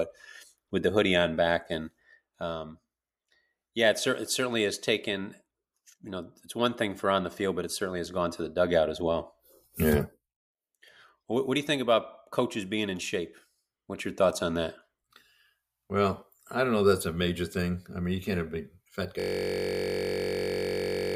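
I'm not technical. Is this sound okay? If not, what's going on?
No. There's a system hang loop from 19.20 s to the end, right after "have a big fat". The computer froze, but the sound hardware kept replaying the last tiny slice of audio it held, just 21.33 milliseconds long, over and over. Repeating that fast, about 47 times a second, it turns into a steady buzz instead of sound. The length fits a 1024-sample buffer.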